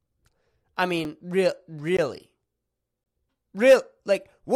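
Three blocks of digital silence turn up in this speech. At 1.05 s there's a 5.8 ms gap, which fits a 256-sample buffer and is short enough to come across as a tick rather than silence. At 1.97 s a 17.4 ms block cuts in, and from 3.04 to 3.06 s there's one of about 21 ms. The last two read more as brief holes. Each time the audio drops to zeros and returns with no fade, either because the output buffer wasn't filled in time or because a calculation produced invalid values.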